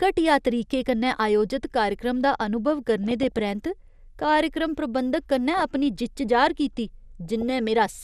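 MP2 compression runs throughout the speech: the sound is dull and granular, with upper sub-bands switched off and remaining bands coarsely quantised, likely from a low bitrate of around 80 kbps. DAB burbling follows at 3.04–3.40 s, 5.54–5.62 s and 7.25–7.59 s, as bit errors at a fraction of a percent slip past error correction, putting short blips of noise into individual sub-bands.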